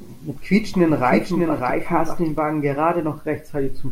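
Speech, and from 0.6 s to 2.38 s there's a doubled audio track: a second full-band copy of the same audio trails the original by roughly 0.7 s, sitting a bit quieter, around 5 dB down. It has no decay or room colour, and it cuts in and out abruptly at both ends. Most likely the signal got captured twice with one path lagging, or an edit left two out-of-step copies overlapping.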